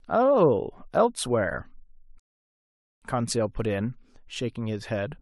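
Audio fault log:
2.20–3.02 s, rebuffering stall: the player drained its store of downloaded audio and had to halt playback until the next chunk of the stream arrived. The speech drops abruptly into silence for about 0.82 s, then picks up again at precisely the point where it broke off. No speech is skipped or repeated; the gap simply inserts dead time into the clip, so the pause lands unnaturally in the flow of speech.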